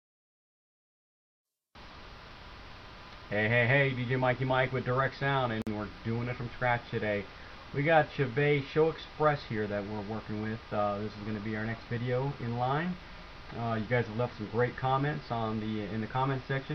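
At 5.62 s the continuous sound drops out for about 49 ms, resuming at 5.67 s exactly where it left off. This is a gap at a join of encoded pieces: the audio was encoded in separate sections and butted together untrimmed, so the encoder's start-up delay and the padding on the previous section's final frame both remain as silence. The edges of the dropout are smeared by the codec, so the fully silent part is shorter.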